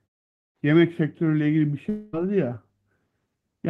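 A long network dropout runs from 1.89 s to 2.15 s. For about a quarter of a second the speech gives way to a smeared, buzzy continuation of the last sound, which fades but never reaches full silence before the speech resumes. The likely cause is that packets stopped arriving and the receiver filled roughly 0.23 s by extending what it last had. About 0.24 s of the original speech is simply missing when playback picks up again.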